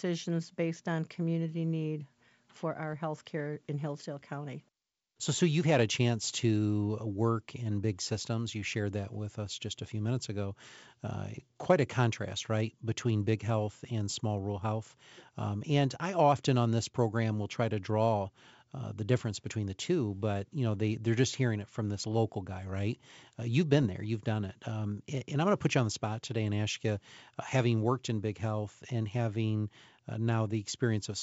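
At 23.83 to 23.86 s the speech has bit errors on an ADPCM link, here the G.722 path. A low rate of flipped bits knocks the decoder's step size and predictor off track, so each error rings briefly as a pop with a rough, level-shifting burst.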